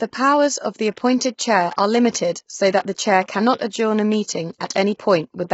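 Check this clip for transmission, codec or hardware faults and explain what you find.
One codec fault is present throughout the speech. From start to end the voice sounds heavily rough and grainy, with nothing above 7.7 kHz. This is likely low-delay AAC compression: short frames blur the pitch harmonics, and a bitrate near 16 kbps starves them.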